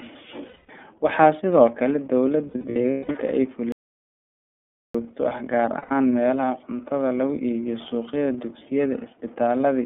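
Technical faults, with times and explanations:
Throughout, iLBC codec: the speech passes through a narrowband line of roughly 250 Hz to 3.5 kHz, coded at 13.33 kbps in 30 ms frames. Each frame's excitation is coded on its own, which makes the voice sound plainly rough and synthetic. A spectrogram shows nothing above 3.5 kHz and a thinned floor below 250 Hz, and the harmonics look smeared and grainy rather than clean.
0.48 to 0.70 s, 2.49 to 3.15 s and 5.78 to 5.92 s, lost iLBC frames: packets went missing and the decoder filled each gap by repeating the last pitch cycle blended with noise. Each gap is heard as a held, buzzy or breathy vowel. The first gap covers 210 ms, the last 120 ms, and the middle stretch has 390 ms lost in scattered bursts across 660 ms, the longest run about 200 ms. Every frame decodes independently, so the speech is right again almost at once after each gap. A spectrogram shows flat, repeated harmonic bands that fade slightly, and the waveform shows a periodic, repeating shape.
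3.72 to 4.95 s, playback stall: the output goes completely silent for about 1.2 s in mid-flow and then resumes. The likely cause is that the player ran out of buffered data or its thread was blocked until it recovered. The waveform shows a flat, near-silent line with abrupt edges on both sides, and the spectrogram shows a blank vertical band.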